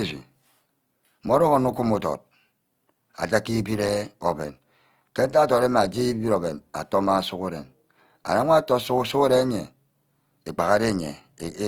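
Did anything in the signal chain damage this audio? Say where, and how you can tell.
Yes. Opus compression runs through the whole speech clip, from start to finish, likely introduced at the codec stage. The damage is plainly audible: the speech turns rough and grainy, with a noisy texture, yet the bandwidth stays full and content reaches about 20.2 kHz. That combination points to Opus in its music (CELT) mode at a low rate, around 24 kbps, where starved bands are filled with folded or noise-like energy rather than left empty.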